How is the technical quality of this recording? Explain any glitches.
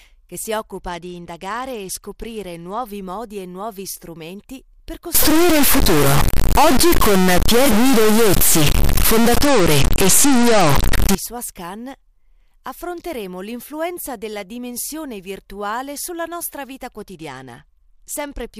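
The recording has clear technical problems: three stretches of Bluetooth degradation and a six-second span of digital distortion.

Bluetooth SBC bit pool drop, at 0.58 to 2.90 s, 9.42 to 10.98 s and 16.97 s to the end at 18.60 s. A congested wireless link forced the encoder to spend far fewer bits per frame, consistent with a bit pool falling from 28 to 11, around 90 kbps. The highest sub-bands are starved and the rest coarsely quantised, so the speech turns dull and gritty until the rate recovers.

Stuck bit, from 5.15 to 11.15 s, overlapping the second Bluetooth drop. The likely cause is one data bit frozen at a fixed value in the converter or its wiring. Roughly half the samples come out wrong by that bit's weight, in a pattern that tracks the waveform. The result is added distortion on the speech, with noise filling the pauses because small values near zero are pushed off too.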